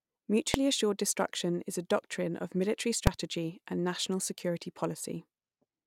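A calculation in the processing chain produced infinite or invalid numbers, which were pinned to full scale, and the output sat flat at one extreme value for a whole block. This invalid-numbers-at-full-scale fault cuts into the speech twice. At 0.54 s it lasts about 0.73 ms, which fits a 32-sample block. At 3.07 s it lasts about 2.9 ms, consistent with a 128-sample block. Both blocks are too short to hear as separate onset and release pops, so each lands as a single sharp bang.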